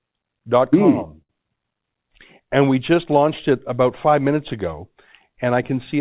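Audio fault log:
1.22–1.30 s, short stall from a late packet: a packet arrived late and the jitter buffer ran dry, so the receiver stretched the preceding sound for about 71 ms, giving a held sustain with a slight buzz or dip. The speech then resumes without loss, about 71 ms later, within band-limited audio with nothing above 4 kHz.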